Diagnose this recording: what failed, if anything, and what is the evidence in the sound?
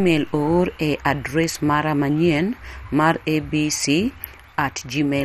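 Codec stage: the speech sounds dull and gurgling throughout, with granular distortion. A spectrogram shows nothing above 14.6 kHz and upper bands blinking on and off in blocks. The likely cause is heavy MP2 compression, consistent with about 56 kbps, which starves and drops whole sub-bands.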